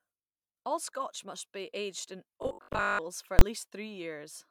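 Speech recording with two faults. From 2.43 to 2.99 s, just after "must be aged in", the voice becomes a rigid 50 Hz metallic buzz, robotic sound likely from repeated short 20 ms buffers replacing most of the real audio. At 3.39 to 3.41 s, invalid numbers at full scale pin the output for about 23 ms, which fits a 1024-sample block and is heard as a single loud bang.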